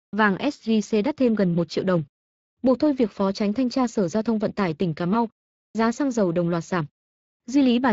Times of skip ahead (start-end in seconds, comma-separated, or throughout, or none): none